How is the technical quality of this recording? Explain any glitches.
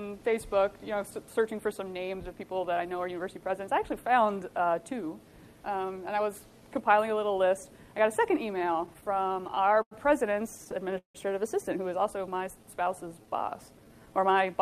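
The recording has clear network-delivery glitches in its second half, though no audio is lost.

From 8.59 to 9.94 s and 10.57 to 11.18 s, repeated stalls (stutter): the jitter buffer kept running dry, so the last sound was held, up to 164 ms at once. It's jerky, unlike smooth stretching.

From 12.18 to 14.27 s, a jitter buffer slow-down: repeated pitch periods add 235 ms, so the audio plays at 89% speed and the same pitch, drawn out evenly rather than halting.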